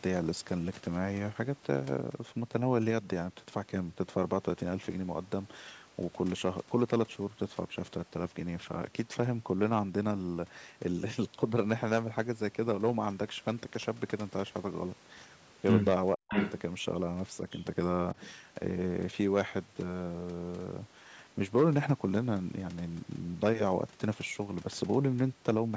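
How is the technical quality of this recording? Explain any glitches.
Two glitches sit close together around 16 seconds, in audio that passed through call microphone processing and carries nothing above 8 kHz.

From 16.14 to 16.34 s the speech suddenly sinks, falling by roughly 40 dB for about 200 ms, so the voice nearly vanishes for a moment. This is likely speech suppressed in double talk: with both ends talking at once, the echo canceller could not tell the local talker from loudspeaker echo and pulled the whole signal down.

From 16.32 to 16.6 s a second, delayed copy of the voice breaks through, arriving 552 ms after the original and only about 5 dB quieter, so it sounds like a repeat trailing the speech. This is likely an echo leak: one side was on a loudspeaker, and its echo canceller missed part of what its microphone picked up, sending that residue back down the call.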